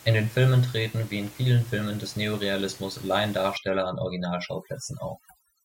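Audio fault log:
3.57–5.64 s overdone noise removal: gated bands near the noise estimate vanish, taking quiet speech detail and leaving twinkling specks and scattered spectrogram dots on blank floor.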